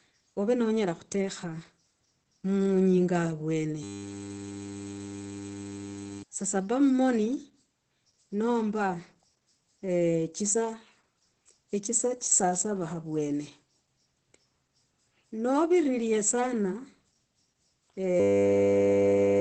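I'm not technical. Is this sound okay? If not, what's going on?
No. The whole clip has Opus voice compression: the speech sounds a bit muffled and hoarse, with the crisp top end gone above about 8.7 kHz. There's also a system hang loop, twice: from 3.83 to 6.23 s and from 18.2 s to the end, the computer froze and replayed one tiny 10 ms snippet, making a steady buzz and losing roughly two seconds, then one second, of speech.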